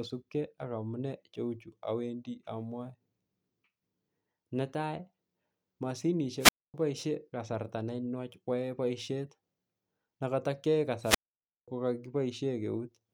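At 6.39 s the speech breaks with a wireless microphone squelch dropout, lasting to 6.74 s. The radio signal from the analogue FM transmitter fades, hiss rises briefly, and the receiver's squelch mutes the output for about 0.25 s before the speech returns at "kasarta nenwach". A second, longer dropout runs from 11.02 to 11.68 s, with a muted hole of about 0.53 s between the burst of static and the signal's recovery.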